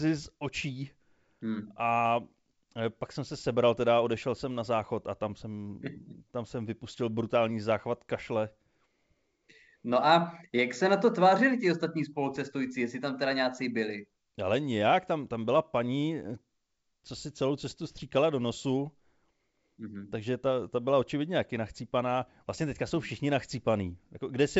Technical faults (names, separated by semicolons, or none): none